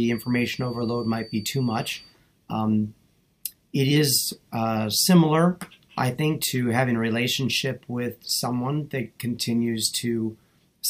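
From 0.0 to 2.18 s a feedback whistle sits near 4.6 kHz, a thin wavering tone roughly 25 dB under the sound, likely a loudspeaker-to-microphone loop hovering at the edge of feedback.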